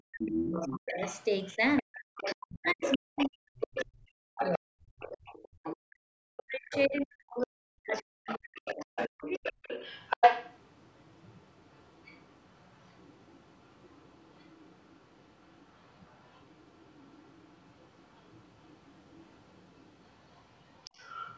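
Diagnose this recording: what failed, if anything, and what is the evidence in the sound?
The failure sits in the call processing stage, in the echo canceller. From 0.0 to 5.27 s and again from 5.86 to 9.47 s, the speech dips hard, by around 40 dB at its deepest, and drops out in pieces for roughly four and then three seconds. This pattern is likely speech suppressed in double talk: the canceller could not tell the talker from loudspeaker echo and attenuated both. Unlike a network dropout, the gaps track the second voice rather than occurring at random.

A second voice is audible under the talker, which is likely the other side's voice leaking through because echo cancellation was incomplete. It runs from 0.29 to 5.77 s at only about 5 dB below the speech, reappears briefly at 6.71 to 7.01 s about 15 dB down, and persists from 7.92 s to the end at about 20 dB down. It is a distinct, separate talker, not a smeared copy of the main speech, which separates it from room reverberation or a simple delay.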